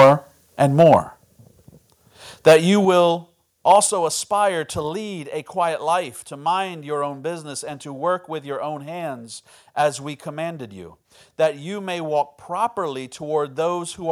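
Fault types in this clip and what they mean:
Microphone overload: Harsh, crackling flattening on the loudest syllables in the first four seconds, worst at the very start, where peaks push about 10 dB past the limit and a sizeable share of samples is cut off. The likely cause is input gain set too high for the converter.
Microphone volume stepped down: Speech and background drop abruptly in level three times, by about 5 dB at 1.02 s, about 6 dB at 2.85 s and about 5 dB at 3.87 s, each just after a distorted peak. This is likely the call software cutting the input volume.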